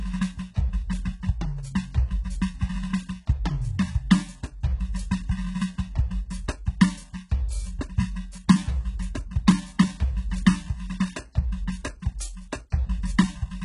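From start to finish the music carries heavy damage of the kind left by HE-AAC compression, likely at a very low rate, around what a 12 kbps stream would give. The treble still sounds bright, yet it is a rebuilt copy of lower bands, so its harmonics fail to line up and cymbals turn gritty and metallic. Nothing sits above about 11.1 kHz. Plain low-pass filtering would sound dull instead, not synthetically bright.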